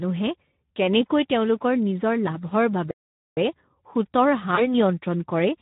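A speech clip coded throughout with the Speex codec, and the coding is plainly audible. Speex is a CELP coder that rebuilds the voice from a predicted filter plus a sparse excitation signal. The bandwidth here is consistent with a setting around 11 kbps, where the excitation gets few bits. Voiced sounds therefore come out hoarse and grainy rather than clean, and any top band above 8 kHz is only a noise-like fill instead of real detail.

From 2.91 to 3.37 s the output goes silent for about 0.46 s in the middle of the flow. The likely cause is a playback stall, where the player ran dry of buffered data or its thread was held up. The speech halts abruptly, leaves a hole, and then resumes once the audio path recovers.

From 4.55 to 4.68 s there is VoIP packet loss concealed by the speech codec. The missing stretch fits a single lost 20 ms frame. The decoder filled the gap by extending its last pitch and filter settings with falling gain, so the voice is stretched into a buzzy tone or a coloured noise that fades. 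Because each frame of the decoder's prediction builds on the one before, the speech stays weak or distorted for a short while after the loss before it returns to normal clarity.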